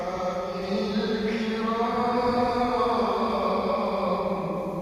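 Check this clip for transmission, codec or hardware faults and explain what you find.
No faults found.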